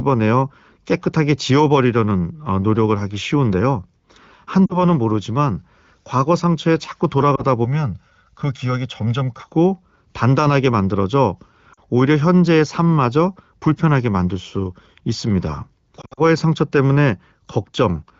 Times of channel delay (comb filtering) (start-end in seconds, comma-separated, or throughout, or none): 7.65-9.47